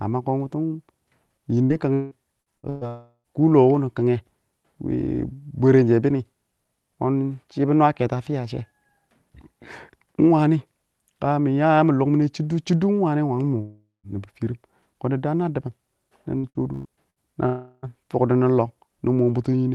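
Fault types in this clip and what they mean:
Repeated packet loss (robotic sound): Packets were lost or arrived late several times in close succession, and each gap was bridged by stretching the last sound. Speech turns choppy from 1.6 to 2.8 s and 16.4 to 17.2 s, with over a third of each stretch patched.
Long network dropout: Audio likely stopped arriving for about 0.4 s at 2.9 s, 13.6 s and 17.5 s. The last sound is drawn out as a fading buzz or hiss, briefly decaying to silence in the first two cases, before speech resumes with that portion gone.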